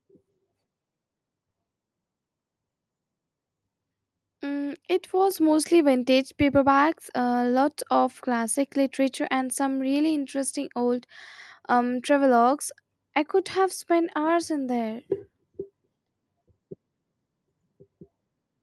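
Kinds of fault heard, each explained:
Microphone volume stepped up: at 5.31 s the input level of the microphone itself is raised in a single jump of about 5 dB, just before "mostly vintage paperbacks uh", so the speech and the room noise beneath it get louder at the same instant. This sets it apart from a talker moving closer or speaking up, which would lift the voice but not the background, and from a compressor's gradual gain ramp. The Opus call path's coding texture stays the same across the jump.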